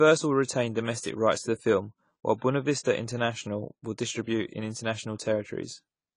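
Throughout the speech, the audio was likely passed through AAC compression at a low bitrate, one that points to about 24 kbps. With nothing above 10 kHz and coarse quantisation below, the speech sounds dull and smeared, with plainly audible warbling and fizzy sibilants.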